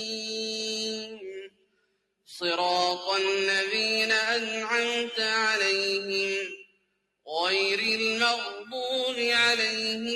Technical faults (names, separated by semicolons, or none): noise suppressor applied to music or sounds; sound cut by the noise suppressor